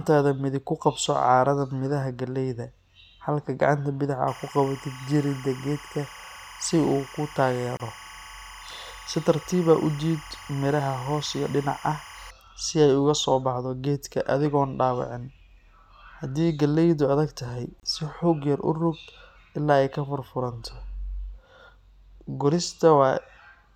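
From 4.28 to 12.31 s there's timecode bleed: LTC leaking in from a nearby track, a chirpy warble flipping around 1 and 2 kHz roughly 20 dB under the speech, consistent with 25 fps code. At 7.77 s and again at 17.80 s you get a gap at a join of encoded pieces. Separately encoded chunks were butted together with their padding left in, so the speech drops out for 27 and 31 ms, then picks up where it stopped.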